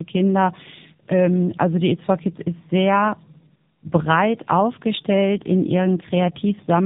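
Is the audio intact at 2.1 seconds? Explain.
No. At 2.1 seconds, as across the whole clip, the speech carries tandem speech coding. It passed through G.729A at 8 kbit/s, then through a G.711 A-law link, and was finally recoded with AMR-NB at 10.2 kbit/s. That put two low-rate speech coders in a row, with the second working on the first one's damage. The result sounds rougher, more muffled and more warbly than either coder alone would leave it, with nothing above 3.8 kHz.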